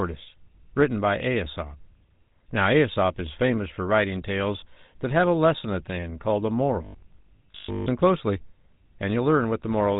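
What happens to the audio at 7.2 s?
Right after "the end called a", from 6.85 to 7.87 s, the speech turns into a rigid, metallic buzz at a fixed 50 Hz, and only the rough shape of the words comes through. This is robotic sound from repeated short buffers, likely caused by new audio arriving too seldom, so the playback repeats the last stretch while most of the real audio is skipped. A 50 Hz buzz fits a 20 ms repeated buffer. What sets it apart from codec roughness is that the buzz sits at a fixed rate and follows the voice only roughly.

Underneath, the GSM full-rate codec roughness heard across the whole clip is also present here: a gravelly, buzzy texture with nothing above 3.8 kHz, consistent with the 13 kbps coding.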